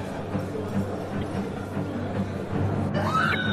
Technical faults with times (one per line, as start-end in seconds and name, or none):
0.00-3.53 MP3 compression
1.19-1.24 damaged data in a compressed stream
3.31-3.35 damaged data in a compressed stream